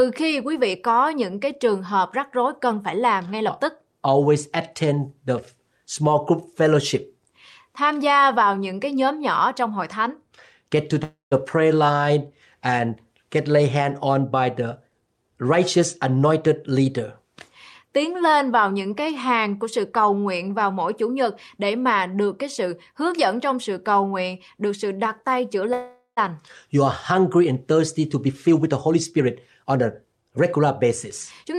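At 11.03 s the speech stops and the last sound carries on as a fading buzz, then about 150 ms of silence. This is a call audio freeze, likely from delayed packets draining the jitter buffer. Speech resumes at 11.33 s. A 280 ms gap was inserted, and nothing is lost.

After "lay hand on by", from 14.61 to 16.98 s, a jitter buffer speed-up follows. The receiver trims short pitch-period slices to shrink its backlog. Speech runs at 112% speed with pitch unchanged and sounds hurried. Roughly 300 ms is removed.

After "sự đặt tay chữa", at 25.73 s, a second call audio freeze occurs, likely from the same cause. The held sound fades, then about 90 ms of silence follows. Playback picks up at 26.19 s after a 438 ms inserted gap, with nothing missing.

From 27.78 to 31.54 s, another jitter buffer speed-up plays the speech at 110% speed, at the same pitch. It sounds rushed as roughly 400 ms is cut away.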